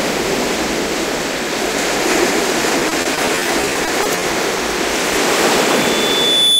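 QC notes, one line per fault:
2.79–4.23 s, repeated packet loss (robotic sound): the audio turns choppy, with around sixteen short holes, the longest about 40 ms, punched into the stretch. Each hole is papered over by stretching out the sound that came just before it, so a quarter of this span, roughly 340 ms in all, is repeated material rather than real signal. The next dropout arrives before the last one settles, which keeps the sound broken up.
5.52–6.59 s, loudspeaker feedback squeal: a single piercing tone at 3.5 kHz rises out of the sound, swelling over about a second until it sits around 5 dB above everything else and is still ringing when the clip ends. A microphone is picking up the loudspeaker it drives, and at this one frequency the loop gives back more than it takes in. Each pass around the loop reinforces the tone until it dominates.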